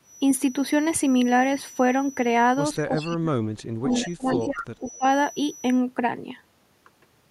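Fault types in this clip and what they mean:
Feedback whistle, 0 to 5.85 s: a thin, steady 5.9 kHz tone sits well below the speech and swells and fades slowly in level. The likely cause is a loudspeaker-to-microphone loop held right at the edge of feedback, sustaining one frequency without running away.
Speech suppressed in double talk, 2.88 to 5.04 s: the voice dips sharply, at its deepest almost vanishing, in pieces through this stretch. The likely cause is an echo canceller that, with both sides talking, could not separate the talker from the echo and attenuated both.
Echo leak, at 2.99, 3.91, 4.29 and 4.86 s: brief scraps of a copy of the voice arrive 189 ms late, faint at the first and last and more noticeable around 4.29 s. Likely, a far-end echo canceller let part of its loudspeaker pickup through.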